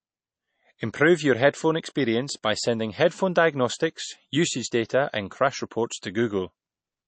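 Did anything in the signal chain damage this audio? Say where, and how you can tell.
Yes, at the codec stage. Across the whole speech clip there is nothing above about 8.3 kHz, a hard ceiling typical of a low-bitrate MP3 encode, and the smeared, swirly texture that such encoding leaves is audible throughout. The likely cause is low-bitrate audio saved at a high bitrate: material first coded at something like 32 kbit/s and then re-encoded much higher. The second pass cannot restore the discarded band or undo the artefacts.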